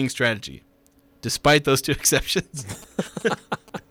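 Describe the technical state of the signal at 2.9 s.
A galloping dit-dit-dit of short buzzes sits around 20 dB below the speech at 2.9 s. These are GSM signalling bursts, running from 2.36 s to 3.79 s. A nearby 2G phone is sending brief clusters of radio bursts while it signals the network, and the audio circuitry rectifies that RF into the audio path. The buzz pitch of about 217 Hz matches the repetition rate of the phone's transmit bursts.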